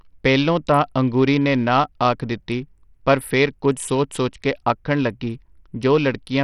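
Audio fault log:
Throughout: Bluetooth SBC compression. The speech carries heavy codec damage: nothing is heard above 14.5 kHz, the remaining upper treble flickers in and out, and a gritty quantisation noise with some aliasing sits on the sound. This most likely comes from an SBC link at a small bit pool, which fits a rate near 64 kbps. The encoder starves the top sub-bands of bits and quantises the rest coarsely, with no hearing model to hide the error.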